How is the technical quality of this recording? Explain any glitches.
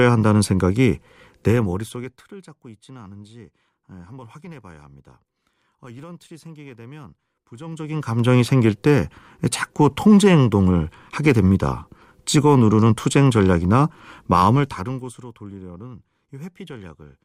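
The recording has audible zipper noise on two level moves. From 1.44 to 2.32 s a fast ticking rides on the speech as it drops by roughly 25 dB, and the same ticking returns from 7.52 to 8.32 s as the level climbs back. The gain moves in unsmoothed 1 dB jumps, around 30 per second, each leaving a small click.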